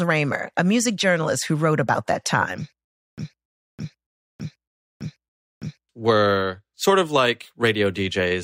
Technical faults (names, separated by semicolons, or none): stutter with silent gaps